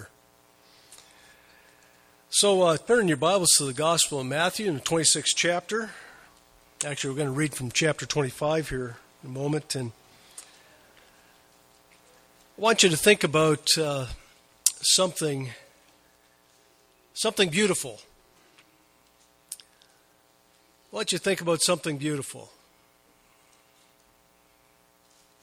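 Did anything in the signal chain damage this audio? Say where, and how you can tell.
Yes. There are compressed frames skipped at the codec stage, at 2.87–2.92 s and 6.97–7.00 s. Each time the sound jumps ahead by around 20 ms, which fits two missing 10 ms frames.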